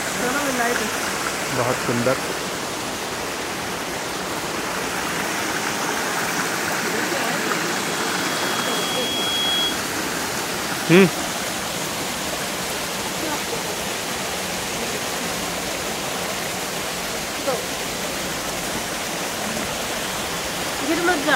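The audio carries a loudspeaker feedback squeal from 7.65 to 9.86 s: a microphone re-amplifies its own loudspeaker until the loop gain passes unity at 3.3 kHz, and that tone swells over roughly two seconds to a few dB above the programme. A spectrogram shows a single brightening horizontal line, and the waveform envelope grows.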